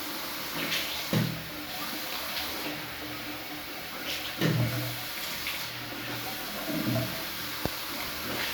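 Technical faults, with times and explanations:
Nothing technical jumps out here; the sounds in the clip come across without any trouble worth pointing to.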